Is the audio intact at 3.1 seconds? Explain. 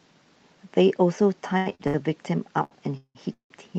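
No. From 2.97 to 3.17 s the speech stops for a call audio freeze, most likely from delayed packets draining the jitter buffer. The receiver stretches the last sound into a fading buzz or hiss, which ends in about 70 ms of silence. When audio returns it resumes where it left off, shifted later by 180 ms, with nothing lost. On a waveform this shows as a decaying smear, then a flat line. A spectrogram shows smeared bands, capped near 8 kHz by the call codec, then a blank gap.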